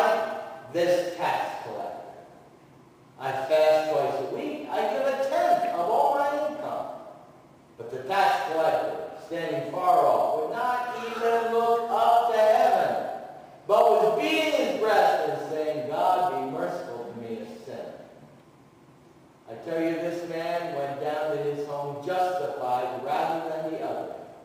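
A bright, metallic fizz, about 26 dB below the sound, runs through the whole clip and swells with it. This is imaging from sample-and-hold upsampling. The mirrored band at 12 to 24 kHz fits 24 kHz audio raised to 44.1 kHz by repeating samples unfiltered.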